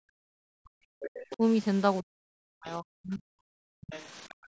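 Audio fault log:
0.0–1.43 s, 2.01–3.52 s, 3.7–3.89 s, 4.27–4.48 s, speech suppressed in double talk: the speech sinks by as much as about 40 dB, likely because the echo canceller treated overlapping far-end talk as echo. On the waveform the envelope collapses in patches. On the spectrogram the harmonics fade and the upper bands thin out.
1.02–1.09 s, 1.3–1.36 s, 3.81–4.04 s, 4.29–4.34 s, other side's voice leaking through: short, faint scraps of a second voice sit roughly 15 to 30 dB under the speech, likely echo the canceller left behind. On the spectrogram they show as weak, broken harmonic traces inside or beside the suppressed gaps.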